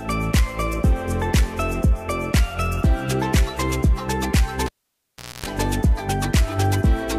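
At 4.66 s a live cable is pulled and plugged in again. Breaking the signal path gives a sharp pop, after which the sound drops to near silence for about 0.75 s. As the plug goes back, only its tip makes contact at first, leaving the input exposed to 60 Hz mains hum, so a raw buzz of about 0.26 s is heard. A second pop at 5.46 s marks full contact and the return of the sound.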